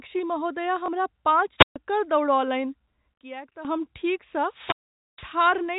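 Speech carried over a telephone-grade path shows three kinds of fault. The path's G.711 telephone coding works normally and limits the band to below 4 kHz. At 0.86–0.88 s one packet was lost, and the receiver filled the 20 ms gap with a repeat of the previous packet. That packet loss with last packet repeated is heard as a small blip. Between 1.58 and 1.76 s, and again from 4.45 to 5.39 s, the radio link of an analogue FM wireless microphone faded far enough for the receiver's squelch to shut the output. Each wireless microphone squelch dropout begins with a short surge of hiss or static, then falls to near silence, about 133 ms in the first case and about 463 ms in the second, before the sound returns. From 3.14 to 3.65 s there is a sudden gain jump. The level drops by about 13 dB in a single step, with no fade in or out, and the background noise falls together with the speech. An abrupt step like this usually clicks at its edges. 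The likely cause is a digital gain setting or bit shift applied without a ramp and then reversed about half a second later.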